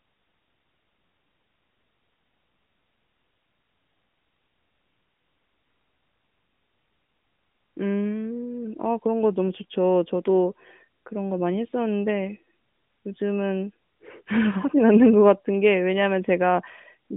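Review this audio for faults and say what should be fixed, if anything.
Nothing stood out on listening, so there is nothing here that needs fixing.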